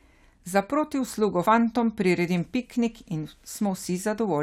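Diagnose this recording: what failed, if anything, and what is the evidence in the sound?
The codec stage failed: at 1.45 s the speech jumps forward by about three compressed frames, around 70 ms, with 23.2 ms frames. Unlike a buffer dropout, there is no silent gap or sharp click. Overlapping frames blur the join into a brief smeared blip.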